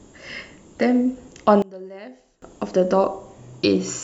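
From 1.62 to 2.42 s, the speech drops by about 24 dB and turns faint. One channel inverted is the likely cause, cancelling the centred voice in mono.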